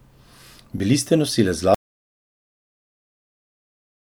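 At 0.78 s, new audio failed to arrive in time, so the playback device played its last 20 ms buffer once more. This repeated buffer, running to 0.80 s, puts the same brief slice of speech twice in a row with a hard join, heard as a quick stutter or click.

From 1.74 s, just after "ste nosilec", the input was likely lost through a dropped link or device, and silence was written in its place. This audio dropout to silence cuts the speech off mid-flow into total silence, with no room tone, lasting to the end of the clip.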